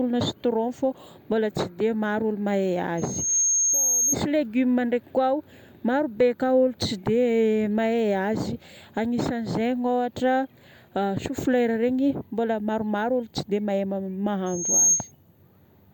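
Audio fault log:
2.97–4.16 s and 14.46–15.12 s, loudspeaker feedback squeal: a 6.5 kHz tone swells within a fraction of a second to about 5 dB above the speech as mic-to-speaker loop gain exceeds unity.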